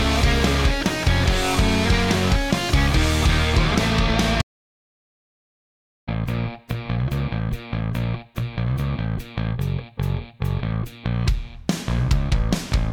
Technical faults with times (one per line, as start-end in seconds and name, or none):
4.42-6.07 audio dropout to silence